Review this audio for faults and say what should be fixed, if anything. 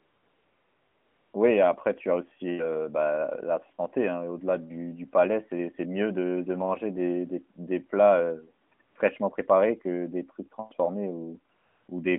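AMR comfort noise covers 0.00 to 1.34 s and returns at 8.68–8.72 s, 8.74–8.80 s, 8.82–8.96 s and 11.54–11.88 s. In each gap the phone judged the talker silent and stopped sending speech frames, so the receiver substituted a smooth synthetic hiss built from a rough level and spectrum estimate. On a spectrogram these stretches are flat, featureless noise with sharp vertical edges. The waveform shows an even low band switching on and off, chopped rapidly by the 40 to 140 ms cluster near 8.7 s. The narrowband codec underneath, with light damage inside a 200 Hz to 3.4 kHz band that fits the 12.2 kbps mode, is not a fault here. Disable discontinuous transmission or relax the voice activity threshold on the sending handset to prevent it.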